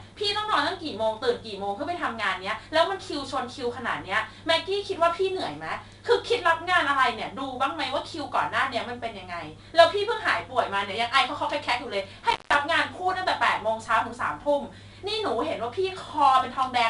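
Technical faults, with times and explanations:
Throughout: 4-bit ADPCM compression. A gritty hiss rides on every loud passage and nothing above 10.7 kHz remains, from coarse predicted steps that fit an 88 kbps stream.
12.30 to 12.55 s: intermittent contact. The sound crackles and drops out for about 155 ms, leaving faint hiss, as a loose connection briefly opens the line.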